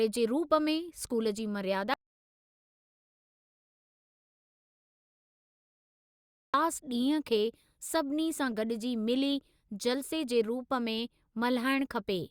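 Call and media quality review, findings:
Audio dropout to silence, 1.94 to 6.54 s: speech cuts out mid-flow, about 4.6 s of silence with no room tone, then resumes abruptly. Likely an input device disconnect, failed link or stray mute upstream of the encoder. Distinct from noise-gate or VAD suppression: no gradual release and no comfort noise. The content is lost outright rather than muffled or garbled.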